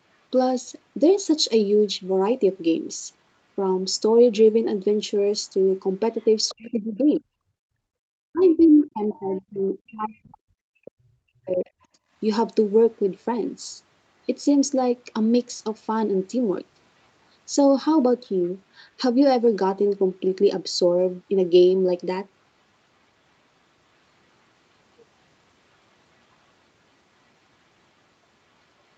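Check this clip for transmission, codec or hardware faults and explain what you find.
Echo-canceller faults appear in three forms, concentrated between 6 and 12 seconds of this speech clip; the audio is band-limited to 8 kHz throughout by the Opus call path.

Other side's voice leaking through, at 6.19–6.26, 6.48–6.55, 8.40–8.64, 8.81–8.87 and 9.09–9.41 s: faint scraps of a second talker, well below the main speech, likely residual loudspeaker echo the canceller failed to remove.

Speech suppressed in double talk, 6.50–7.45 s and 8.30–11.69 s: the main voice dips deeply while the far side is playing on the loudspeaker, likely because the canceller attenuated both talkers together.

Background gated by the echo canceller, 11.98–12.12 s: the room sound drops by about 15 dB for a moment, then returns once the canceller releases the microphone.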